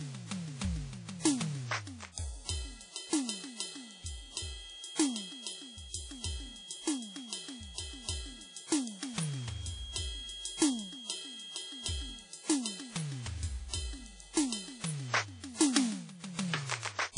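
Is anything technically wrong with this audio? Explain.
Yes, two faults are audible. Throughout the music, the sound is washy and ringing, with a hiss that rises and falls with the signal and nothing above about 10.1 kHz. This is likely WMA compression, consistent with a low bitrate near 32 kbps, where long transform blocks spread quantisation noise across time and weak components are dropped.

From 3.44 to 12.31 s, a thin steady whistle at 3.3 kHz sits well below the music, slowly swelling and fading. This is likely a feedback whistle: the speaker-to-microphone loop hovers at the edge of feedback, so one frequency keeps ringing without building into a howl.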